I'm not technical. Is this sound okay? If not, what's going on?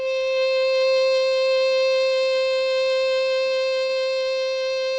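No. This music has two short stalls from a late packet, at 3.47 to 3.53 s and 3.86 to 3.92 s. Each time, audio arrived late over the call connection, so the receiver held the last sound for about 27 and 30 ms until the packet caught up, then went on without losing anything.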